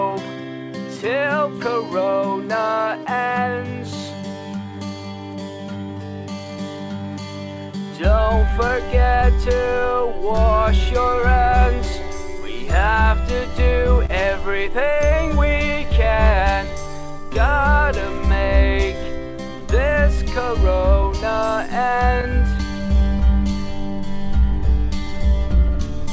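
Throughout the recording, the sender's audio clock runs about 2 percent slower than the receiver's. This is clock drift between sender and receiver: the sender delivers slightly fewer samples than the receiver plays, so the jitter buffer keeps drifting toward empty. The receiver has to keep compensating, and the audio acquires a faintly loose, unsteady timing that never fully settles. The sound arrives through a G.722 call path at 64 kbps, with nothing above 8 kHz.

From 0.44 s to the end at about 26 s, those compensations appear as repeated timing corrections. To keep the buffer from running dry, the receiver repeatedly duplicates tiny slices of audio, all in the same lengthening direction and at uneven spacing. The net effect is playback at 98 percent speed, with roughly 0.4 s added in total. Individually the edits are small, heard mainly as occasional slight hiccups and a tempo that seems to sag a little.

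Between 10.84 s and 12.42 s come a few scattered short gaps, where individual packets were lost or arrived too late. The receiver covered each hole by extending the last sound. The holes are only a few milliseconds each, adding up to about 1 percent of that stretch, so nothing is audibly missing. What remains is a brief tick or smear at each patch.

From 14.06 s to 14.11 s there is a short stall from a late packet. A packet was not there when it was due, the buffer emptied, and the receiver stretched the preceding sound by 30 ms until the packet arrived. Playback then resumed from the same point, with the overall delay now 30 ms longer. No content is lost, but one moment is held a little too long, with a slight buzzy or dipping quality.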